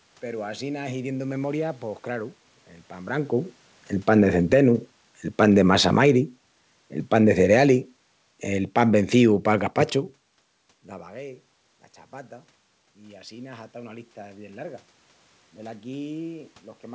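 Between 3.93 and 9.79 s, automatic gain falling cuts the level by about 10 dB. Unlike a talker moving away, the room noise sinks too.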